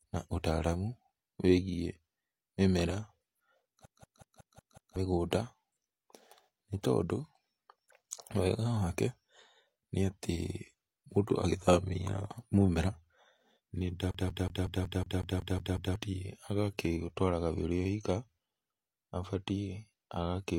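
From 3.85 to 4.96 s and again from 14.11 to 15.96 s, the speech sticks like a CD stuck on one turn: the same 184 ms slice replays 6 and then 10 times, each cut by a brief mute. Its perfectly even rhythm sets it apart from the irregular repeats of network dropouts.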